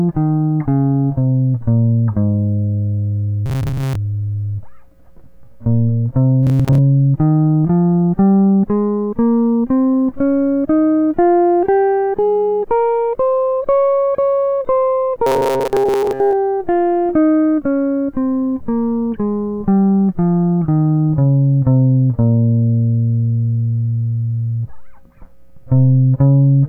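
Robotic sound from repeated short buffers appears three times in the music, from 3.46 to 3.95 s, from 6.43 to 6.78 s, and from 15.27 to 16.34 s. Each passage turns into a rigid, metallic buzz at 134 Hz that only loosely tracks the music. The likely cause is audio arriving too seldom, so playback kept looping a fragment of about 7.5 ms, one period of that buzz, filling most of the time while the real material was skipped.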